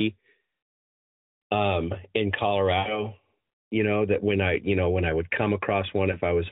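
At 2.80 to 3.02 s, just after "um in", the speech smears into a drawn-out, fading tone and then returns weak. At 6.12 to 6.20 s there is a brief warbling dip. Both are lost AMR speech frames. The decoder repeated the last good settings at falling level, which fits about 60 ms, then 20 ms, missing in the narrowband codec's mildly buzzy 4 kHz-limited sound.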